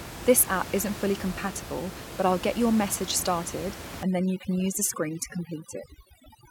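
Speech recording with room noise sitting about 12 dB below the voice. From 4.03 s, right after "get your message started", to the end, overdone noise removal takes hold. The reduction is set so aggressively that any frequency band near the estimated noise level is pushed far down or cut, and the quieter parts of the voice are removed with the noise. The background drops and breaks up into twinkling artefacts. On a spectrogram, the gaps between words go almost black with scattered isolated specks, and the speech harmonics look patchy, with weaker upper bands broken into fragments. On the waveform, the noise floor drops abruptly to a nearly flat line at 4.03 s.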